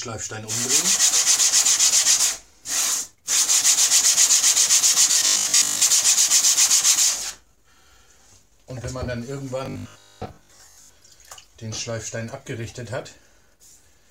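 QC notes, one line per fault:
5.12–5.82 s and 9.66–10.98 s: robotic sound from repeated short buffers, a rigid metallic 50 Hz buzz, likely from a 20 ms block replayed over most of the real audio. Unlike steady hum, it follows the sound's rhythm.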